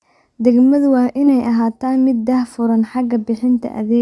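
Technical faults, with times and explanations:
No technical faults can be heard in this speech recording. There is nothing here that calls for a time or an explanation.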